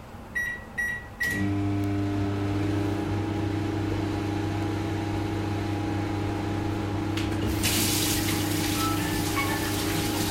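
Word clock ticks run from 0.17 s to 10.19 s: around twenty sharp ticks of uneven strength, about every half second. The receiving device wasn't locked to the sender's clock, and a mismatch of a few tens of parts per million made one sample drop or repeat at each slip.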